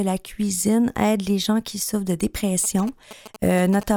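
GSM signalling bursts run from 2.64 to 3.83 s, after "gens qui souffrent de": a nearby 2G phone's radio pulses, rectified by the audio circuit, gallop as a dit-dit-dit of short 217 Hz buzzes roughly 15 dB below the speech.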